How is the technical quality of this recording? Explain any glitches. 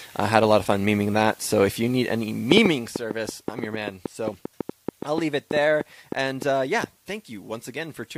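There's one real problem: a train of clicks from 2.52 to 6.85 s. About 5.5 ticks a second arrive at an uneven pace, roughly thirty in all, popping well above the sound, around 15 dB hotter. The likely cause is interference or a faulty connection injecting repeated pulses.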